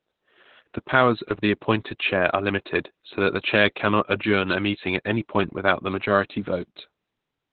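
Throughout the speech, the audio has passed through Opus voice compression running in its SILK linear-prediction mode at narrowband, a setting whose damage fits a bitrate of around 8 kbps. The coder has discarded everything above 4.4 kHz and quantised the excitation signal coarsely. The result is heavily muffled, telephone-like speech with a hoarse, buzzy grain and a slightly robotic edge, as consonants lose their crispness and voiced sounds take on a synthetic texture.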